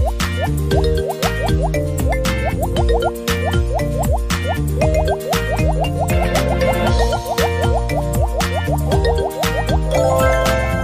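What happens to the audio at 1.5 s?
Nothing goes wrong at 1.5 s; the audio plays through that moment intact, with no dropout, click, glitch or other audible fault.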